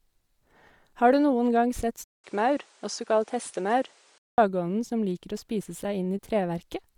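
A speech clip carrying two faults. Throughout, the sound has a breathy, grainy edge in the upper range, with hiss-like texture where fine detail should be. This is plainly audible codec damage, most likely Bluetooth LC3 compression. The upper spectrum is thinned out and partly filled with noise, which fits 10 ms transform frames at a moderate bitrate around 48 kbps. Just after "du noen gang sett", at 2.04 s, the sound drops out for 200 ms. It then returns duller, with nothing above 10.5 kHz. A faint new background noise sits roughly 35 dB below the speech. The level barely changes. This lasts until 4.38 s, when the brighter sound returns. The input was likely switched to a poorer device and then back again.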